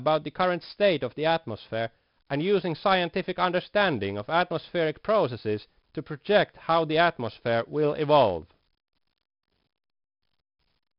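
4-bit ADPCM compression runs through the whole of this speech clip. Each sample is coded as a coarse 4-bit step from a predicted value, with the step size adapting as it goes. The resulting error is a heavy gritty hiss that rises and falls with the speech level, and sharp onsets distort where the step size lags behind. Nothing is heard above about 5.3 kHz, which fits a sample rate near 11 kHz and further dulls the sound.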